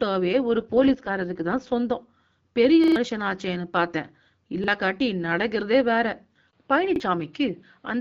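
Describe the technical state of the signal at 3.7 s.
At 3.7 s the speech is intact, carried cleanly through the AMR wideband (HD Voice) path at 12.65 kbit/s, a rate at which that codec keeps speech clear.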